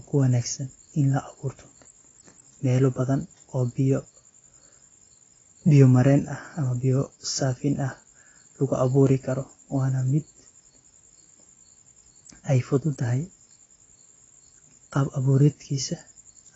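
From start to finish the speech sounds dull and smeared, with nothing above about 7.9 kHz and a fizzy, warbly texture on sibilants and held sounds. That's likely AAC compression, AAC-LC dropping the top band and thinning the spectrum at a bitrate that fits roughly 24 kbps.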